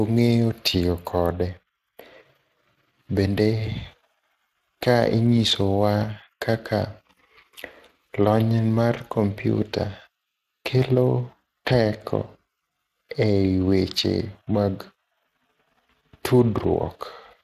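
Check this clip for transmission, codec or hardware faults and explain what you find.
One codec fault runs through the whole speech clip. Speex codec: a CELP coder starved of excitation bits, fitting roughly 22 kbps, makes speech plainly hoarse and grainy, with noise-like rather than watery artefacts, and nothing above 15.3 kHz.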